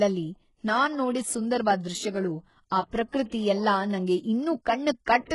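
Speech with gritty, metallic, lispy sibilants and treble that ends near 11.3 kHz throughout, likely HE-AAC compression, rebuilding highs by band replication, which fits roughly 12 kbps.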